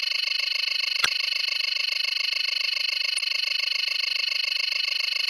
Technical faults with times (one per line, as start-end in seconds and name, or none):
1.01-1.06 damaged data in a compressed stream
3.15-3.20 damaged data in a compressed stream